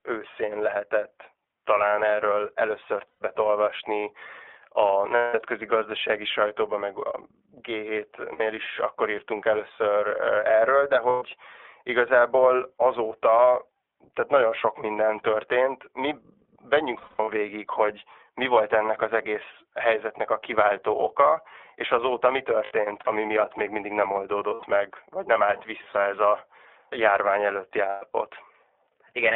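Throughout, the iLBC codec limits the speech to a 300 Hz to 3.5 kHz telephone band, with plainly rough, synthetic texture. On a spectrogram, everything stops sharply at 3.5 kHz. The 30 ms frames point to the 13.33 kbps mode.

Lost iLBC frames appear at 3.08, 5.15, 8.34, 11.09, 16.97, 22.64, 24.54 and 27.89 s, with gaps from 60 to 240 ms. Each gap sounds like a held, buzzy or breathy vowel made from a repeated pitch cycle. The voice is right again almost at once. On a spectrogram, each gap shows flat, repeating harmonic stripes. The losses from 16.97 to 17.29 s (longest run roughly 200 ms) and at 22.64 and 27.89 s are broken into scattered dropouts.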